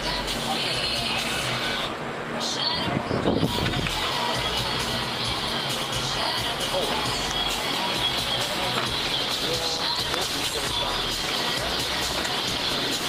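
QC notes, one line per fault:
9.01–13.09 s, call bitrate drop: the encoder rate falls from 32 to 18 kbps at 9.01 s and stays there to the end, so the sound is coded more coarsely and turns rougher and watery. Unlike packet loss, this degradation is continuous, with no gaps or glitches.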